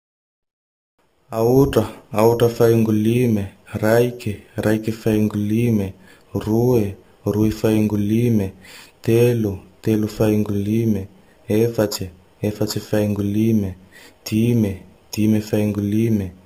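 From start to finish there's imaging from sample-and-hold upsampling: the speech was taken from 12 kHz up to 48 kHz by just repeating samples, no smoothing. Mirrored copies sit about 23 dB down, the lowest filling 6 to 12 kHz, giving a metallic fizz that tracks the speech.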